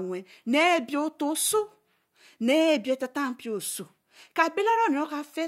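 Nothing in the speech stood out as a technical problem on listening.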